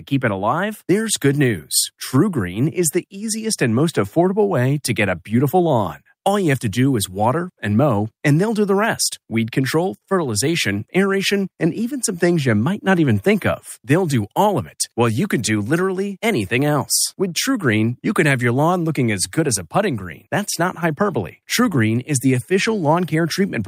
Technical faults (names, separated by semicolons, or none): none